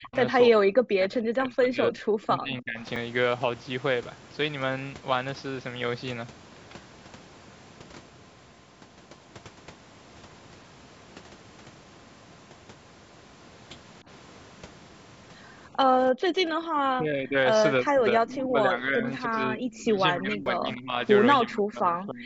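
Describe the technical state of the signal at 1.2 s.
At 1.2 s the speech sits inside a stretch of speech suppressed in double talk, running from 0.5 to 2.78 s, with the level pulled down by roughly 35 dB at its deepest and parts lost. The likely cause is an echo canceller ducking its own talker while the far side spoke. Unlike a packet dropout, the sound fades and returns in uneven pieces.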